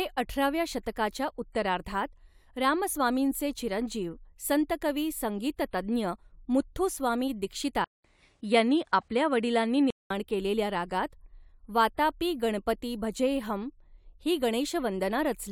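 After "तज्ञ मुथ्थुस्वामी", from 7.84 to 10.10 s, a 200 ms gap, then duller speech shifted in level by about 5 dB, cut above 10.8 kHz: likely input switched to a poorer device.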